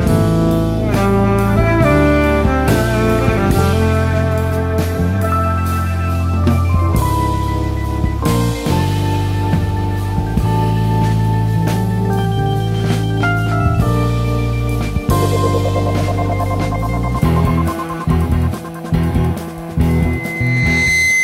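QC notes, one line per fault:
19.88–21.23 s, loudspeaker feedback squeal: the microphone picks up its own loudspeaker, and at 2 kHz the loop gain passes one, so that tone reinforces itself. A pure whistle swells over about a second to roughly the level of the surrounding sound, then runs to the end.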